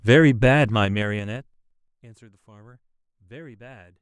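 Zipper noise runs from 0.68 to 2.05 s as the speech level falls by roughly 25 dB. The gain moves in unsmoothed 3 dB jumps, about five a second, and each jump puts a small click into the signal, heard as a ticking that rides on the fade.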